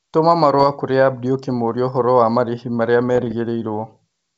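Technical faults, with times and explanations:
0.59 to 0.65 s and 3.09 to 3.35 s, bit errors on an ADPCM link: a short pop with a rough, crackly edge in the first burst, then a longer stretch of grainy clicks and brief jumps in level in the second. Flipped bits in the G.722 stream throw the decoder's step size and predictor off track, so each hit smears on for a few milliseconds instead of staying a single click, even at a low error rate.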